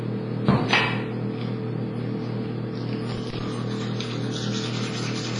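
From the first moment the whole clip carries heavy codec damage, most likely WMA compression at a low bitrate; the washy, ringing smear fits something around 24 kbps. Long transform blocks spread quantisation noise over tens of milliseconds, and nothing survives above about 10.4 kHz.

Then from 3.09 to 3.48 s there's a burst of loose connector crackle. A worn or dirty contact is making and breaking as it moves, chopping the signal on and off, so for those four-tenths of a second you get irregular scratchy crackling over the sound.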